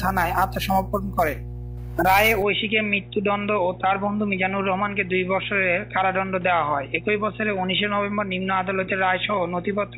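Mains hum runs through the whole recording: a steady 60 Hz tone with low harmonics, only about 10 dB below the signal and therefore plainly audible. It points to a ground loop or nearby transformer coupling the power line into the signal path.

At 2.42 s the sound abruptly turns dull and narrow, with nothing above 3.8 kHz from there to the end. There is no gap and little level change, but a new noise floor appears roughly 35 dB down. This is likely the input switched to a poorer device.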